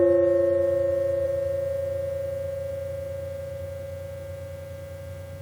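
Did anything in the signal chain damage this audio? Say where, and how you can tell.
Yes, codec stage: compressed frames skipped at 1.24 s. About 40 ms, roughly one frame, goes missing, and the audio jumps ahead by that much.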